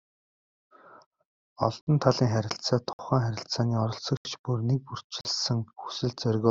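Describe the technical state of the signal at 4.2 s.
A short hole cuts through the speech. This is a block of digital silence running from 4.17 to 4.25 s, a gap of 80 ms where the samples were replaced by zeros, likely because the output buffer was not filled in time. The signal drops to silence and back with no fade.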